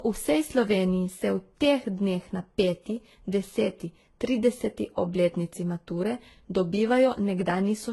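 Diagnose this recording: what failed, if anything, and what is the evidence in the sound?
Transcoding between lossy codecs runs throughout the speech, from start to finish, at the codec stage. The band stops dead at 11.7 kHz, and two distinct kinds of coding damage sit on top of each other. The combined artefacts fit a very low-rate HE-AAC encode, around 16 kbit/s, that was likely re-encoded to Vorbis at roughly 33 kbit/s. The second encoder spent its bits reproducing the first one's artefacts and added its own, while the lowest cut-off in the chain carried through.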